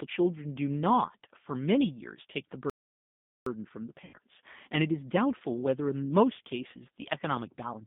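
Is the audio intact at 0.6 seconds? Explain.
No. At 0.6 seconds, as throughout the clip, the speech sounds thin, slightly rough and synthetic, with nothing above 3.6 kHz or below 150 Hz. This is G.729 codec damage: at 8 kbit/s it rebuilds speech from a vocal-tract filter, a pitch predictor and a few pulses per frame.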